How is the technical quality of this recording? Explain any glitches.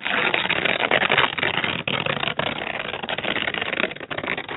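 No audible glitches or faults.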